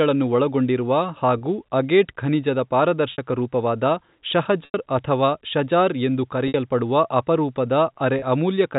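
Speech over a telephone-band G.711 link shows packet loss with pitch repetition at 1.38 s, 3.12 s, 4.65 s, 6.48 s and 8.19 s, with gaps of 30, 60, 90, 60 and 30 ms, which points to 30 ms packets. The receiver repeats the last pitch period to bridge each gap. The 30 ms gaps, one just before "ಅಗೇಟ್ ಖನಿಜದ", sound like a briefly held buzz. The 90 ms gap before "ಅಥವಾ ಷಜಾರ್ ಎಂದು" fades toward silence before the speech returns.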